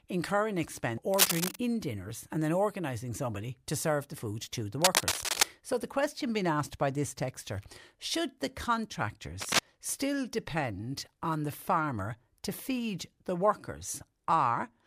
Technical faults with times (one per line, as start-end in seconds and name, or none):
1.14-1.56 cable scratch noise
4.82-5.43 cable scratch noise
9.40-9.59 cable scratch noise